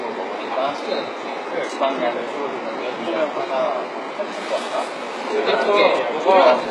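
Throughout, the treble sounds rebuilt rather than real: likely HE-AAC compression at very low bitrate, copying lower bands upward. Highs turn gritty and metallic, stopping near 11.5 kHz.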